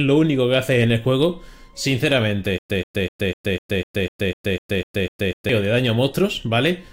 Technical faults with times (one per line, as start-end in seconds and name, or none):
2.58-5.49 stutter with silent gaps